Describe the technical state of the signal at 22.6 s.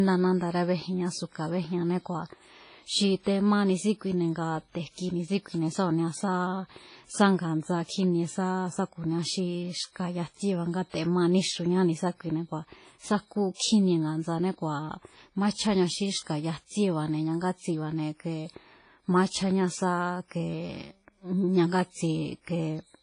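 At 22.6 s, as throughout the clip, the speech shows likely WMA compression: long transform blocks smear quantisation noise into ringing, washy hiss, with nothing above 10.1 kHz, which fits a low bitrate.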